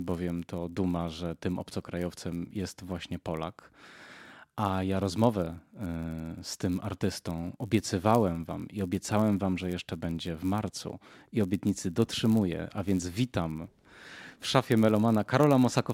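From start to finish, a filter in the processing chain is restarted on every block: it discards its internal state at each block boundary and begins again from silence. Each restart leaves a small transient at the start of the block, so the speech carries a steady buzz at about 93.8 Hz, which fits a 512-sample buffer. The buzz rises and falls with the loudness of the speech.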